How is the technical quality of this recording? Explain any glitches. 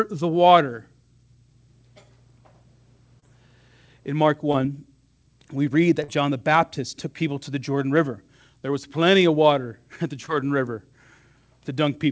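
Four short concealed packet loss glitches break up the speech, each a quick smear or wobble where a bit of audio went missing, at 3.20 s, 4.52 s, 6.04 s just after "we read", and 10.26 s just after "at the". Each gap was about 20 ms except the 6.04 s one at about 40 ms. The packets arrived too late, so the receiver stretched the preceding sound to cover the hole and then eased back into the real signal. The call codec's top end stops at 8 kHz, which fits G.722.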